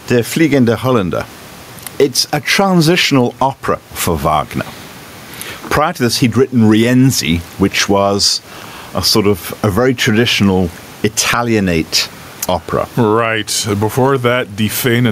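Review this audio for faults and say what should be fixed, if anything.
Gain pumping runs throughout the clip. The gain pumps up and down, swinging by roughly 15 dB. The room noise itself sits about 35 dB below the speech. The likely cause is input gain set far too high, with a fast limiter clamping each peak and squashing loud and soft passages together. Lowering the microphone gain so peaks stay clear of the limiter would prevent it.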